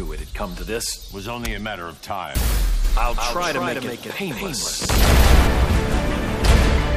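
A second, slower capture path or a misaligned edit has likely mixed the audio in twice, producing a doubled audio track from 2.85 s to 5.47 s. A full-band copy trails the original by around a fifth of a second, roughly 5 dB quieter, heard as a dry, uncoloured echo with no decay or room sound. It cuts in abruptly at 2.85 s and drops out just as suddenly at 5.47 s.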